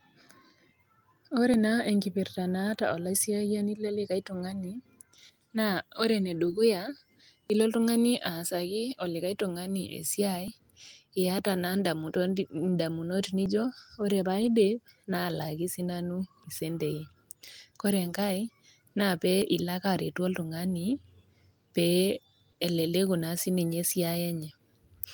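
First thing you'll catch is a tiny skip at 1.54 s, then another at 4.52 s right after "enkipirrta naata olaisiyiani lelikae". That's audio missing between chunks: each hiccup drops somewhere around 20 ms and the two sides are butted together with no silence, so the sound just jumps forward a hair. They keep coming roughly every 3 s, which points to the recorder likely losing a sliver each time it closes one 3-second chunk and opens the next.

At 6.45 to 6.51 s there's a lost packet rebuilt from error correction. About 40 ms, which fits two lost packets, got replaced by the low-bitrate backup copies carried in the following packets. Nothing drops out, but that stretch turns rougher and noisier before clean audio resumes.

The chunk skips carry on at 7.50 s (just before "ilo oltung'ani aasaki"), 10.48 s and 13.46 s. Then there's a second rebuilt-from-FEC patch at 14.41 to 14.47 s, again about 40 ms of grainier, lower-quality audio with no gap. 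The last three chunk skips land at 16.44 s, 19.42 s and 22.40 s.

Right after that, at 22.51 to 22.59 s, there's short concealed packet loss, two back-to-back 20 ms holes the decoder never received. It patched them by extending the preceding sound and then blending back in. You hear it as a quick smear or wobble just before "eleleku naa sininye".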